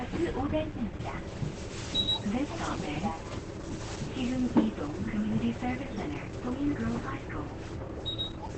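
Throughout, the sound is muffled and hoarse, with nothing above about 8 kHz. That is heavy damage, likely from Opus compression in its SILK speech mode at a very low bitrate, around 12 kbps.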